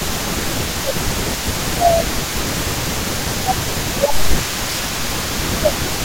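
From the very start to the end of the clip, a faint delayed copy of the speech trails behind it, arriving about 237 ms late and sitting roughly 15 dB below the direct signal. This is an echo leak: the far side is likely playing the call over a loudspeaker, and its echo canceller did not fully remove what its microphone picked up, so a residue of the speech is sent back and heard as a lagging shadow.

Speech suppressed in double talk occurs three times. From 0.79 to 2.3 s and from 3.41 to 4.29 s the speech sags, dipping by around 15 dB at its deepest. From 5.5 s to the end a milder dip of around 10 dB follows. The likely cause is both sides talking at once, which left the echo canceller unable to tell its own talker from the loudspeaker echo, so it turned both down together.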